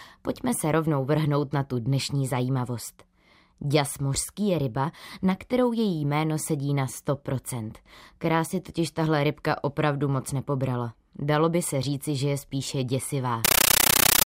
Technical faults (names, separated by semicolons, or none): compressed stream played as audio